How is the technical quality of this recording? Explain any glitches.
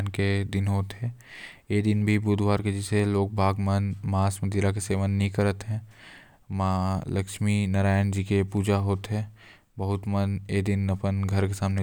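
Two sharp, isolated clicks break the speech, one at 3.00 s and one at 8.57 s. Each is a single thin tick with no gap or muffling around it, most likely dropped samples: a fraction of a millisecond missing from the stream, so the waveform jumps abruptly. A dropout would leave audible silence, but here nothing is lost to the ear, only a vertical line across the spectrum.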